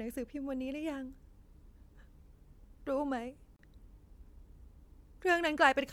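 At 3.56 s the speech drops out for about 29 ms, a gap at a join of encoded pieces: separately encoded segments were butted together with their encoder delay and end-frame padding left in. The waveform flatlines between abrupt, slightly smeared edges; the spectrogram shows a narrow blank vertical band, after which the speech resumes where it stopped.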